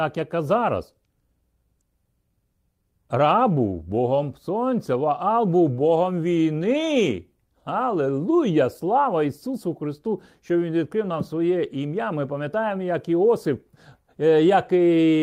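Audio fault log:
No faults heard.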